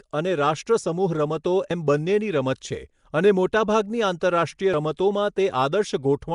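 Throughout the clip, the speech has most likely been through Nellymoser compression, the old Flash microphone codec. It codes short blocks at a fixed two bits per sample, gives weak bands no bits at all and fills them with noise. Here that damage is plainly audible as a rough, hissy halo around the speech and a smeared, underwater character. Nothing reaches above 10.6 kHz, and the sound fits a rate of around 44 kbps.

At 4.74 s there is what sounds like a dropped buffer (overrun). The software was likely too slow to read its samples before the hardware wrote over them. A chunk of roughly 40 ms was lost, and the audio on either side was joined with no gap. There is no silence at that point. Instead, the speech jumps forward abruptly, as if a small slice had been cut out of the recording.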